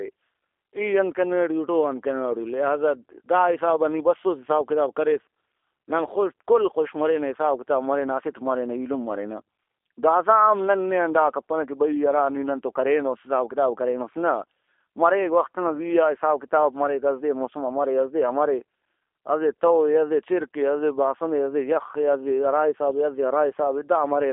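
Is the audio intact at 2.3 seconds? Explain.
No. At 2.3 seconds, as throughout, the speech sounds slightly rough and synthetic, with nothing above 3.5 kHz. This is G.729 codec damage: each 10 ms frame is rebuilt from a vocal tract filter, pitch predictor and sparse pulses, which fits an 8 kbit/s stream.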